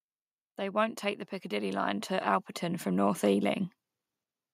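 From 0.57 s to 3.7 s, automatic gain rising lifts the level by about 9 dB. The control judged the input too quiet. Speech and background swell together.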